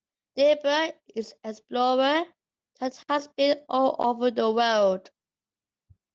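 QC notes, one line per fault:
Nothing to log here, since the speech comes through with no faults and only the ordinary light touch of the Opus voice compression at 24 kbps.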